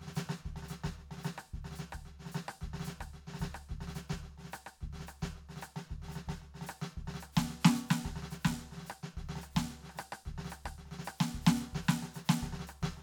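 No technical faults are audible.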